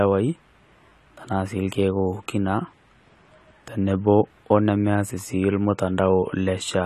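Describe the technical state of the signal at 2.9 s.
AAC compression is present at 2.9 s, as it is throughout the clip. Nothing remains above 14 kHz, and the speech sounds dull and smeared, with a fizzy edge on sibilants. The likely cause is coarse AAC-LC quantisation at a low bitrate, consistent with 32 kbps.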